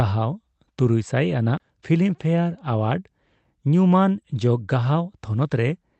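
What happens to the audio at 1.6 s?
A CD skip occurs from 1.57 to 1.60 s. The laser jumped to a different turn of the disc's spiral, so playback mutes for roughly 30 ms and then resumes from another point, heard as a brief tick or short gap followed by an abrupt discontinuity in the speech.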